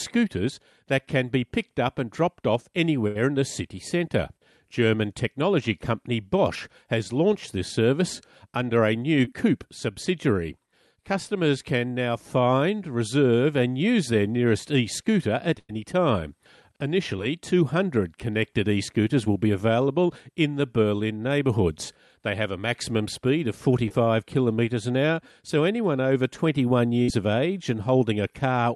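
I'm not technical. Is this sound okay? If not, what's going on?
No. At a few moments the sound is briefly replaced by a stand-in, and in places a tiny piece is missing.

The longest interruptions are a burst of packet loss at 3.07 to 3.17 s, 15.59 to 15.71 s and 27.02 to 27.10 s. At each one, the sound turns for a moment into either a held buzz or a fading hiss, then picks up a little further on. On a call, the audio travels in small packets. Here a run of them arrived too late or not at all. The receiver stretched out the last sound it had to fill the gap, which was about 75, 100 and 57 ms long. The piece of speech that never arrived was slightly longer each time.

Shorter hiccups, each a short concealed packet loss, come at 9.25 to 9.29 s just after "service under a new", at 17.17 to 17.20 s, and at 23.88 to 23.92 s between "a maximum speed of" and "kilometres an hour so". Each sounds like a quick smear or wobble, and a short sound can drop out. 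Only a sliver, about two hundredths of a second, went missing each time, and the receiver papered over it by continuing the sound just before.

From 18.26 to 19.88 s, just before "in the", there are scattered short gaps. These are roughly three tiny ticks or smears, each about a hundredth of a second. Single packets went missing here and there, and each small hole was patched separately.

All of this passed through a typical internet-call connection, which also loses the very highest frequencies.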